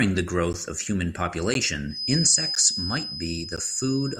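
A speech recording with two separate problems. The first is a gap between chunks: short holes at 0.53, 1.54, 2.55 and 3.56 s, each about 12 ms long and spaced almost exactly 1 s apart. That regular spacing points to the audio being delivered in 1-second chunks with a sliver of silence left at every join. No speech is lost, but the flow is chopped. On a waveform each hole appears as a flat line of near-silence, and on a spectrogram as a thin vertical blank strip across all frequencies. The second problem is a thin, steady whistle from 1.85 s to the end, sitting at 5 kHz only a few dB below the speech and swelling and fading slowly in level. It is most likely a feedback whistle, with the loudspeaker-to-microphone loop held right at the edge of feedback so that one frequency keeps ringing without building up. On a spectrogram it shows as a bright, unbroken horizontal line at 5 kHz running beneath the speech.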